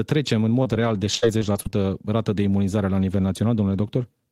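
From 0.63 s to 1.74 s the speech falls into repeated packet loss (robotic sound). Six short gaps, the longest about 50 ms, follow one another in quick succession, and each is patched by extending the sound that came just before it. That concealment covers roughly a seventh of the stretch, so the speech turns choppy, with pieces missing. On a spectrogram the harmonics freeze into flat, smeared bands. In the waveform, short repeated cycles sit where the detail drops out.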